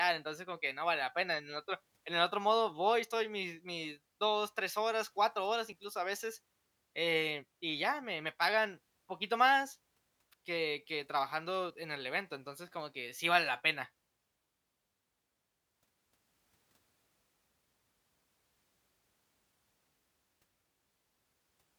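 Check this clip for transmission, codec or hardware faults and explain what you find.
One fault stands out. At 5.72 s, just before "a veces eh y", the speech skips abruptly as roughly 20 ms vanishes, likely audio missing between chunks at a 6-second chunk boundary.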